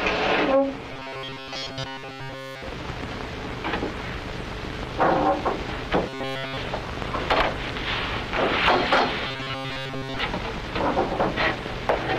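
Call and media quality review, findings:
Rigid, metallic buzz at a fixed 134 Hz, sound only loosely tracked, at 0.92–2.62 s, 6.09–6.58 s and 9.27–10.19 s. Most of the first and third stretches, nearly all of the second. Robotic sound from repeated short buffers, likely a jitter-buffer or playout underrun: the last ~7.5 ms of audio looped while real input was skipped, imposing a buzz at one over loop length.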